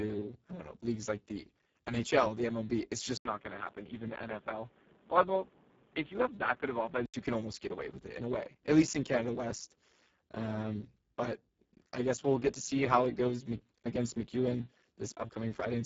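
From the start the whole clip carries heavy Speex codec damage. The speech sounds hoarse, buzzy and close to robotic, which fits a very low setting around 5.8 kbps, and nothing gets through above 7.6 kHz, so the top end is thin and noisy.

At 3.17 s, just before "you can almost get", there's an 80 ms dropout, and then the sound goes dull and boxy with nothing above 3.8 kHz. It's a bit quieter, with a new noise floor only about 30 dB down. That's likely the input switched to a poorer device, and it clears again at 7.14 s.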